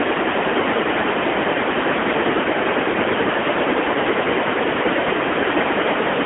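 Throughout, the speech carries AMR narrowband mobile codec damage: nothing survives above about 3.7 kHz, the band sits near 250 Hz to 3.4 kHz, and a plainly audible buzzy, synthetic edge, fitting a mid-rate mode near 10 kbps, separates it from simple telephone filtering.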